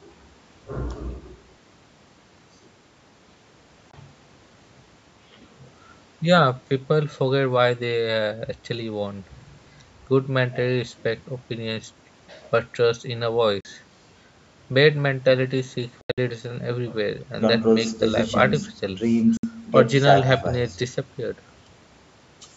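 Short holes open up at 3.91–3.94, 13.61–13.65, 16.01–16.18 and 19.37–19.43 s, the third broken into scattered gaps with an 81 ms run. It's likely a Bluetooth dropout: late packets got discarded, so the audio cuts sharply and picks up further along.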